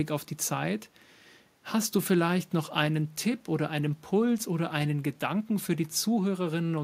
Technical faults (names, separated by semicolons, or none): none